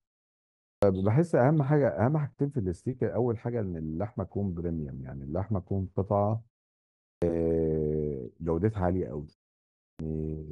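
At 0.66 s, 7.06 s and 9.82 s, speech resumes after pauses of about 0.55 to 0.66 s with a clipped start after a pause. Each time roughly 160 to 175 ms of onset is lost while the output device wakes. Words burst in abruptly. Waveform and spectrogram show flat silence ending in a hard edge.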